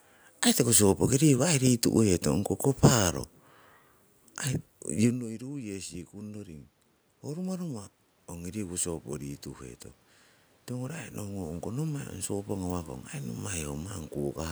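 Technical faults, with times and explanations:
5.06–6.73 s, 7.24–9.51 s and 10.68–13.41 s: automatic gain rising. The talker moves back near 5 s, dropping input about 19 dB, and the gain control lifts voice and room noise together by about 4 to 5 dB each time.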